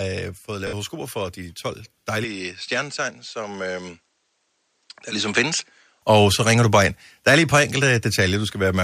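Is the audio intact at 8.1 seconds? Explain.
Yes, the speech at 8.1 s is intact, with no fault at that moment.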